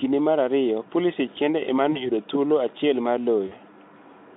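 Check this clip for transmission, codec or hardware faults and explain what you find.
Two dropouts show VoIP packet loss concealed by the speech codec, heard through a narrowband Speex line (roughly 200 Hz to 3.6 kHz) with at most faint coding roughness. The first runs from 1.91 to 2.10 s, between "kende ema" and "thuolo achiel mar"; the second from 3.47 to 3.53 s, just after "thuolo achiel mar". Each loses about 40 ms, which fits two missing frames. The decoder fills the gap by repeating its last pitch and spectral envelope at falling gain, so the speech smears into a brief buzzy tone or coloured noise that fades. Because each frame builds on the previous one, the voice stays weak or distorted for tens of milliseconds or more after packets resume. On a spectrogram, the harmonics flatten into steady horizontal lines that fade, and the waveform shows a repeating, shrinking pitch cycle.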